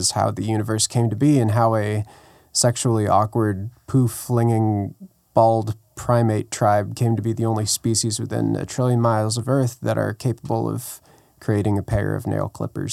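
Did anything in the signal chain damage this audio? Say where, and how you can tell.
No, nothing in this speech recording stood out on listening as a sign of damage from any stage of the signal chain.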